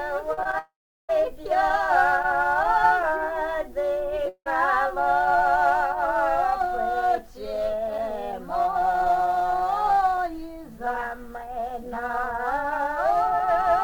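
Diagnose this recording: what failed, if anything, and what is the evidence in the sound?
The network path failed near the start with short concealed packet loss. Three brief gaps, at 0.33 to 0.39 s, 0.43 to 0.47 s and 0.51 to 0.55 s, each cover 20 to 40 ms of missing audio. The receiver's concealment extended the preceding sound across each hole and blended back, so these are heard as quick smears or wobbles in rapid succession rather than clean gaps.

Two longer interruptions follow, most likely long network dropouts. From 0.59 to 1.11 s about half a second of audio is lost: the concealment carries the last sound forward briefly, then fades, leaving roughly 0.38 s of silence before the audio resumes with that section missing. At 4.29 to 4.48 s a shorter break of about 0.18 s shows the same pattern, with a fading tail and roughly 80 ms of silence.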